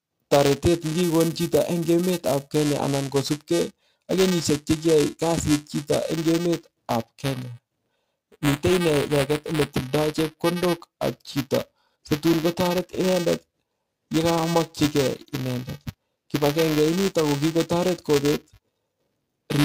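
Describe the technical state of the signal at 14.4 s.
At 14.4 s the signal sits inside a stretch of adaptive stream at a lower bitrate running from 11.15 s to 17.15 s, beginning just after "tildoi chekondok". The connection slowed and the player switched to a cheaper version of the stream without any gap. The change is abrupt and codec artefacts rise. This points to a drop from roughly 96 kbit/s AAC-LC to a 24 kbit/s HE-AAC rendition.

Buffer tearing is also present at 14.4 s, as it is across the whole clip. The writing program and the playback hardware have drifted so that they cross within each period. A small slice of every buffer, a few percent, therefore replays audio from one lap earlier, roughly ten milliseconds old, with hard joins on either side. The result is a robotic buzz at 345 Hz that is audible only while speech is present, which fits a 128-sample buffer.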